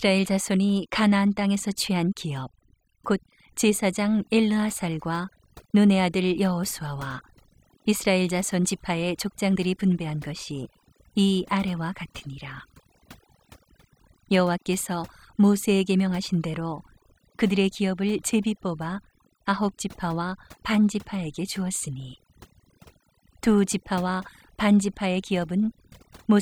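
Overdone noise removal runs through the whole clip: the denoiser's clamping bands near its noise guess, so the background drops to near-silent, twinkling gaps.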